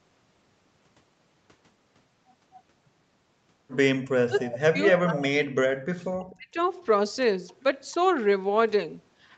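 Speech, with the band ending at 8 kHz as the call path's bandwidth sets it, and two faults. Speech suppressed in double talk cuts the level three times: 4.27 to 4.81 s, dropping by about 20 dB, then 5.0 to 5.55 s and 5.95 to 6.58 s, each dropping by about 40 dB. The likely cause is an echo canceller that turned the talker down along with the far-end echo while both sides spoke. On a waveform these show as abrupt notches in the envelope, and on a spectrogram as vertical gaps where the harmonics fade out. An echo leak follows at 7.48 to 7.54 s: a faint scrap of the speech returns about 258 ms late, roughly 35 dB below the direct sound, likely leftover loudspeaker pickup that the far end's canceller missed. On a spectrogram it appears as a weak, short smear repeating earlier speech, and it barely registers on the waveform.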